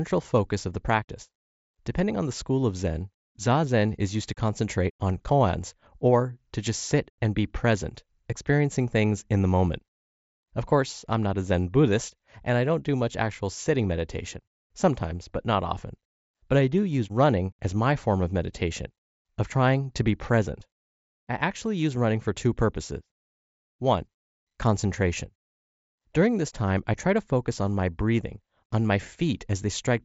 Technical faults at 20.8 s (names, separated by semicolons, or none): none